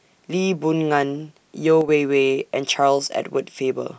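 A speech recording in which one channel drops out, likely from one side of the stereo feed briefly losing signal, between 1.81 and 1.89 s. After the mono sum, the shared speech falls abruptly by about 6 dB for those 70-odd milliseconds, then snaps back to full level.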